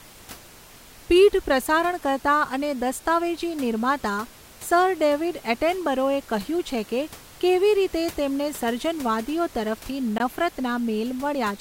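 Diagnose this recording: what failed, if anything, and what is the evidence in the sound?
The codec stage tripped up where separately encoded pieces were spliced together: there's a gap at a join of encoded pieces at about 10.18 s. The speech just drops out for roughly 20 ms, edges a bit smeared, then carries on from exactly where it stopped, with the room noise, sitting about 23 dB under the speech, vanishing along with it. That's the encoder's start-up delay and last-frame padding left in at the splice rather than trimmed off.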